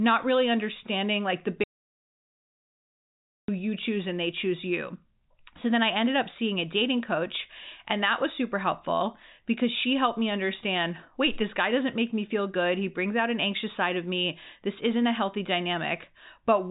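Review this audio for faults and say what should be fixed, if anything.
Audio dropout to silence from 1.64 to 3.48 s: the speech stops after "really understanding like the" and returns at "you choose and they." The gap is about 1.85 s of silence with no room tone, likely because the input was lost while the recorder kept writing. The band above 3.8 kHz is empty throughout, which fits the G.711 telephone path. Monitor the input link and level during recording so that a lost connection or accidental mute is caught and the passage is re-recorded.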